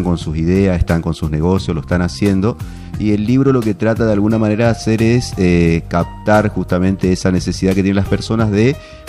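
No technical faults can be heard anywhere here.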